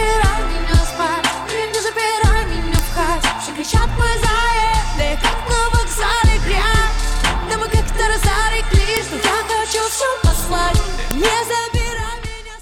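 At 2.79 s, 8.97 s and 11.11 s a sharp, loud snap cuts through the sound, each one a file header played as audio. These are the points where separate WAV pieces were joined without stripping their headers, so the header bytes were read as samples. On a waveform each shows as a narrow spike of a millisecond or so, unrelated to the surrounding signal; on a spectrogram, a thin vertical line spanning the full frequency range.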